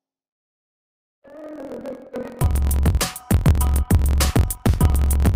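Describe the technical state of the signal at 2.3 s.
At 2.3 s the block size mismatch (truncated) is present, as it is throughout. Each block is cut short, which fits a 1024-sample read, and its tail is discarded. This produces a buzz at about 43.1 Hz. The sound runs 1.12 times fast at roughly normal pitch.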